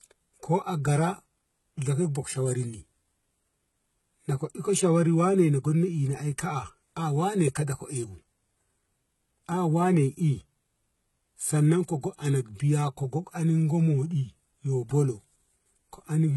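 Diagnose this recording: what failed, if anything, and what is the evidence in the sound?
HE-AAC compression, present throughout the speech. The evidence is a treble band that stays bright but does not sound real: sibilants come out gritty and metallic, and nothing survives above 11.8 kHz. The damage is heavy, which points to a very low bitrate, in the region of 16 kbps. This is likely a codec-stage fault. Only the lower spectrum was coded, and the upper band was rebuilt by copying lower content upward, so its harmonics do not line up with the real voice.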